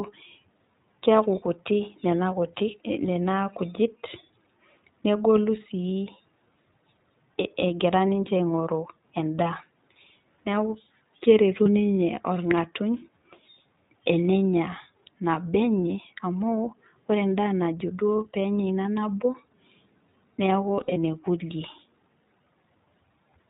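The speech has been coded throughout with the iLBC codec, a narrowband VoIP coder that encodes each frame's excitation independently. The sound fits its 15.2 kbps mode with 20 ms frames. Everything above 4 kHz is gone, so sibilants and consonant edges are dull. The coding damage is plainly audible as a rough, slightly synthetic texture laid over the speech.

Lost iLBC frames first appear from 11.64 to 11.67 s. About 20 ms of audio is missing, which points to a single dropped frame. The decoder fills the gap by repeating the last pitch cycle mixed with noise, so a brief held, buzzy fragment replaces the speech. Because iLBC frames don't depend on each other, clean decoding resumes immediately afterwards.

From 20.76 to 20.97 s, losses are scattered: about 120 ms of audio goes missing over roughly 200 ms, with no run longer than about 40 ms. Repeated concealment here produces a stuttering stretch of breathy, vowel-like filler between brief intact fragments.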